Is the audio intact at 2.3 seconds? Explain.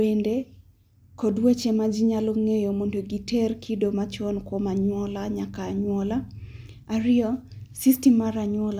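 Yes, the speech at 2.3 seconds plays through intact, with no audible fault at that moment.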